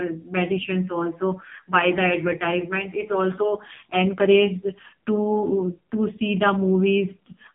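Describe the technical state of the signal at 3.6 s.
At 3.6 s the speech carries AMR narrowband mobile codec damage, present across the whole clip. Nothing above 3.8 kHz survives. The vocal-tract model is starved of bits, which fits the 5.15 kbps mode. The voice sounds heavily buzzy, thin and synthetic.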